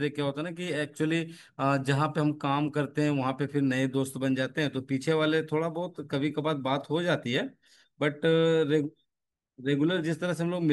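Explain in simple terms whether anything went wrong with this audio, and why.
Nothing went wrong with this audio, because no technical fault can be heard at any point in the recording.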